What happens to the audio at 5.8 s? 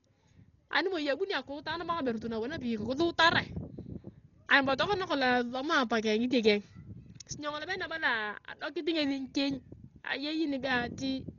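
At 5.8 s you're hearing the same damage that runs through the whole clip: speech that's dull, with nothing above 7 kHz and a rough, fluttery noise clinging to the tones. That's likely Dolby Digital compression at a very low rate, somewhere around 32 kbps, with the band narrowed and starved frequency lines refilled with dither noise.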